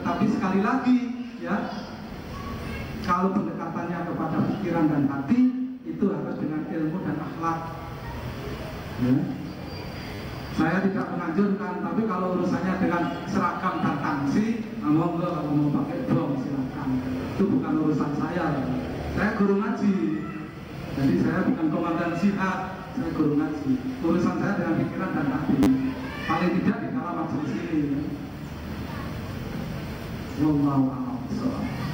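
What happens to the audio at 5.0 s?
Nothing goes wrong at 5.0 s; the audio runs on there without any dropout, click, glitch or other audible fault.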